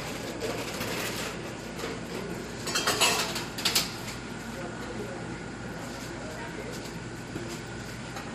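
Word clock ticks run from 0.27 s to 8.27 s, around forty of them at a steady rate of roughly one every fifth of a second. The receiving device is reading a digital link on its own clock, drifting from the sender's by something on the order of 100 ppm. Each time the two clocks slip past each other, a single sample is dropped or repeated, leaving a sharp tick of uneven strength in the sound.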